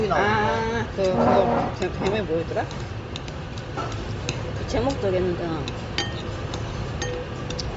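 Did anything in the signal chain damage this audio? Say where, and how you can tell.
Yes, at the codec stage, for the whole clip. Nothing is present above 7.7 kHz, and the upper band that remains has a breathy, grainy texture instead of clean detail, which is plainly audible. This is likely Bluetooth LC3 compression. At a low rate, around 32 kbps, the transform coder discards much of the upper spectrum and fills gaps with noise, working in short frames that fit a 10 ms frame length. A simple low-pass or resampling step would give a clean cut-off without the noisy, granular fill.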